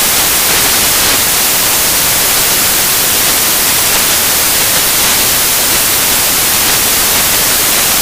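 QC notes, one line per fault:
Throughout, samples built from the wrong bytes: each sample's bytes are assembled in the wrong order or alignment, so rapidly changing low bits dominate and the sound becomes loud, harsh broadband noise.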